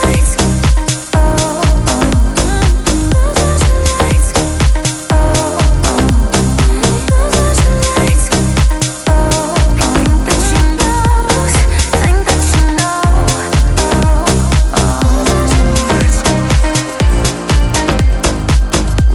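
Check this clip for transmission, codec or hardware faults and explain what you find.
There is one fault, present for the whole clip. Regular ticks at 10 per second accompany the sound wherever there is signal: a resampler restarted on every block, so each 100 ms block edge lacks its true neighbouring samples and carries a small error.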